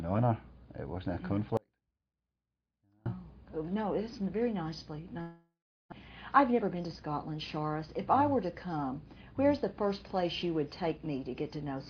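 From 1.57 to 3.06 s there is an audio dropout to a faint residue. For about 1.5 s the sound drops abruptly to a faint residue about 35 dB below the signal. The likely cause is the wanted signal being lost while the path after the break stayed live. Unlike a pause or fade, the cut is sudden, and the gap is never fully silent.

From 5.21 to 5.94 s comes a long network dropout, likely from packets that never arrived. The last sound is stretched into a fading buzz or hiss, followed by roughly 0.37 s of silence. When the audio returns, about 0.6 s of it is simply missing. This differs from the earlier dropout because the gap begins with a smeared continuation rather than a faint residue.

From 6.52 to 7.08 s a jitter buffer speed-up plays the audio at 110% speed, trimming about 50 ms in total by cutting short pitch-period pieces. It sounds hurried, but the pitch stays the same, which separates it from a simple playback-rate change. 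Throughout, the Opus call path limits the bandwidth to 8 kHz.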